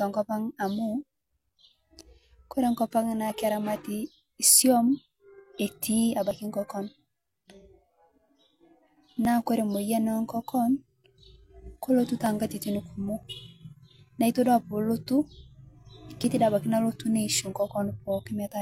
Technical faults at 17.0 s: none

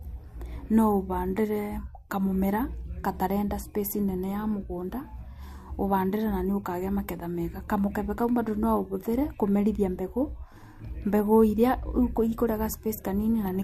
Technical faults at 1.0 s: none

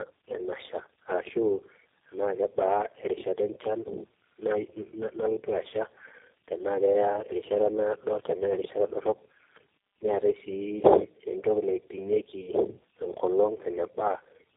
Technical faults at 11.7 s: tandem speech coding

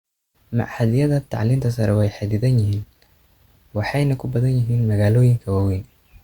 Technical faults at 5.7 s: none

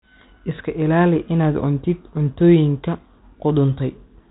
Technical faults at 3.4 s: none

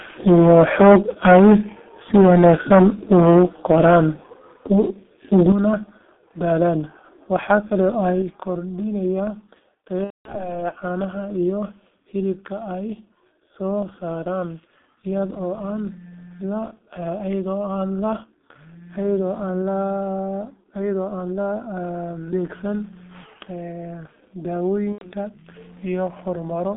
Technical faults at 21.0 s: G.723.1 codec

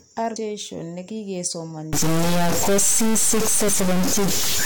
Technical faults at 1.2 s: none

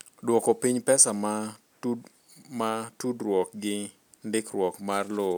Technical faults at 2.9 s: none

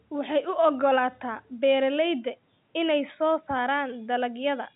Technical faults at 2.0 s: none

